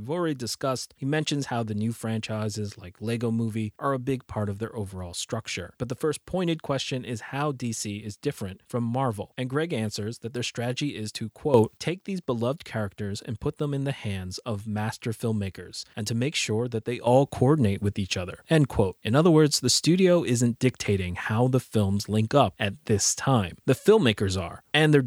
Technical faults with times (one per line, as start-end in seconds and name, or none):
11.54-11.77 sudden gain jump
17.07-25.07 sudden gain jump